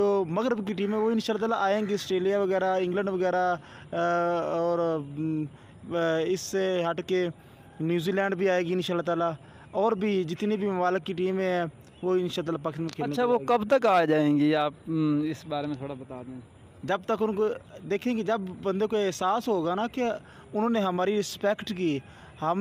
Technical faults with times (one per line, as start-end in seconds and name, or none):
0.00-22.61 clock drift between sender and receiver
0.02-22.43 repeated timing corrections